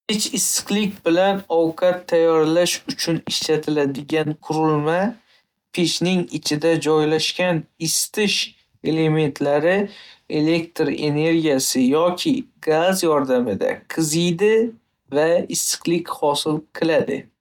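Nothing in this recording stands out as a technical fault; the speech comes through without any glitch, dropout or distortion worth flagging.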